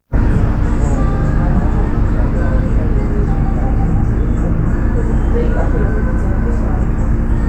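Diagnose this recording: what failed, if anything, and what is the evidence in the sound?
Codec stage: compressed frames skipped at 1.94 s. A few 32 ms frames, roughly a tenth of a second, vanish and the audio jumps ahead at the join.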